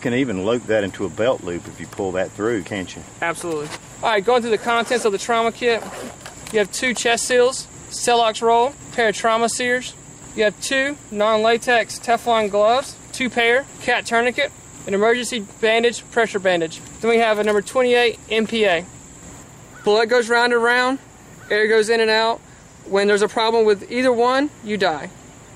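Nothing goes wrong anywhere in this one; there's simply no technical fault to point to at any moment.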